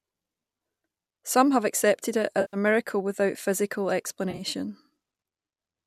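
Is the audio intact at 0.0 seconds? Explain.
Yes, the speech is intact at 0.0 seconds, with no fault at that moment.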